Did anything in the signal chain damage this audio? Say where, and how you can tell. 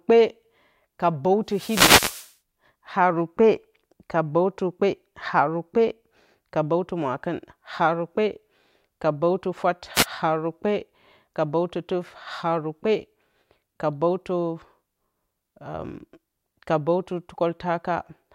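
Yes. The analogue FM radio link between the wireless microphone and its receiver fades as reflected paths cancel the signal, and receiver noise rises into the speech. These wireless microphone noise hits are heard as a swish or burst of static from 1.49 to 2.34 s, lasting almost a second, and a shorter one from 9.94 to 10.06 s.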